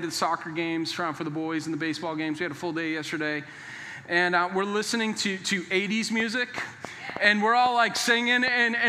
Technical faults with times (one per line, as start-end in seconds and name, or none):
6.20-8.49 train of clicks